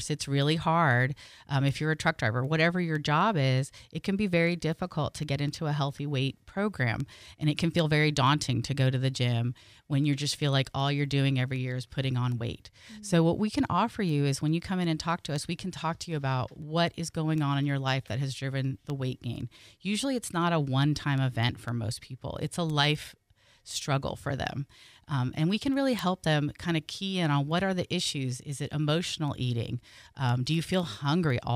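Word clock ticks run from 0.17 s to 31.30 s, recurring roughly every third of a second, well over a hundred in all. This speech passes through an unlocked digital link. The rate points to clocks differing by roughly 100 ppm, each slip dropping or repeating one sample and producing a sharp tick of uneven strength.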